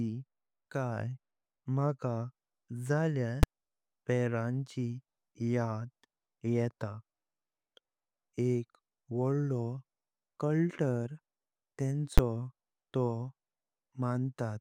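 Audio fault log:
3.43 s and 12.18 s, invalid numbers at full scale: twice the speech is replaced by a sharp bang as a processing block produced infinite or invalid values that were clamped to maximum level. The bursts last about 5 ms and 11 ms, which fits 256- and 512-sample blocks.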